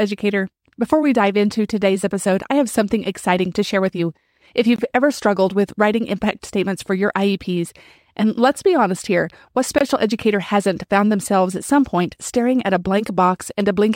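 Short, hard-edged holes of about 23 ms cut into the speech at 4.76 s, before "ever struggled with writing", and at 9.78 s, between "be honest here what" and "educator hasn't found themselves". This is a gap between chunks: silence is inserted at each join of 5-second blocks.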